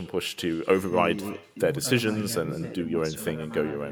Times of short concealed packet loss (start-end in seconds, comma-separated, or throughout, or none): none